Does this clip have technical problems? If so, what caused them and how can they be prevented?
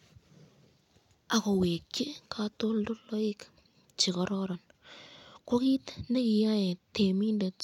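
No, there's nothing technically wrong to hear in this speech recording, so there's no cause to track down and nothing that needs preventing.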